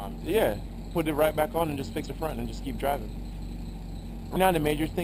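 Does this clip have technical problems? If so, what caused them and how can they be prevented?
Yes. Overlap-add ripple: frames were rejoined with an overlap that doesn't sum to a constant gain, so the level pulses by about 6 dB around 200 times a second throughout, giving a metallic buzz with extra tones around each note. Choose a window and hop size that satisfy the constant-overlap-add condition.

Damaged data in a compressed stream: corrupted bytes made the decoder lose sync, producing brief glitches at 2.03 s and 4.35 s. Protect the stream with checksums or error correction, and keep metadata out of the audio payload.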